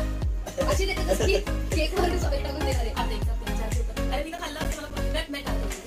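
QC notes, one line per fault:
4.11–5.17 s, CD scratch ticks: five short, evenly spaced ticks, roughly four a second, none longer than about 10 ms. A scratch corrupts more data than error correction can rebuild on each disc revolution, so the player interpolates or mutes those samples.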